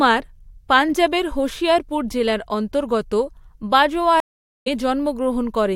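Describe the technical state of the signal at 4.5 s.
At 4.5 s the signal is in the middle of a stream reconnect spanning 4.20 to 4.68 s. The connection dropped, playback went silent for about 460 ms, and a fresh decoder picked the stream up again mid-flow. The speech resumes roughly half a second further on, so a stretch is skipped rather than delayed. On a waveform this shows as a flat, near-silent line; on a spectrogram, as a fully blank vertical band with a restart that fades in.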